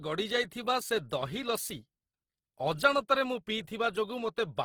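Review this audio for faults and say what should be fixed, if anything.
The whole speech clip has a grainy, rough edge from start to finish, likely Opus compression in its CELT music mode. Starved bands get filled with noise or folded copies of lower bands, which fits a low rate around 16 kbps, though the bandwidth still reaches about 20.4 kHz. To avoid it, encode at a higher Opus bitrate or keep a lossless master for any re-encoding.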